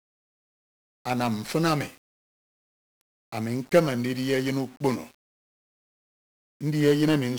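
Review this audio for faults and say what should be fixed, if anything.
The speech carries 1-bit DFPWM compression for its whole length. Each sample holds a single bit nudging an adaptive level up or down, so heavy broadband quantisation noise coats everything. The result is fuzzy and crackly, with the treble lost under hiss, which fits a 48 kbps stream. To prevent it, keep the source in a multi-bit format such as 16-bit PCM or a perceptual codec at adequate bitrate instead of DFPWM.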